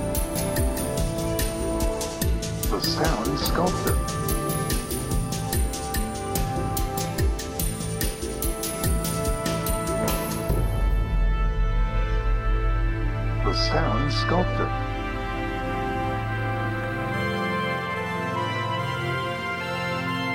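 A single sharp click at 16.84 s is the one fault in this audio, and it has the character of dropped samples. A fraction of a millisecond of the stream is likely missing, so the waveform jumps straight from one value to a later one and leaves a thin vertical line across the spectrum. What separates it from a true dropout is that no sound is audibly lost: there is no gap or silence, only the click itself.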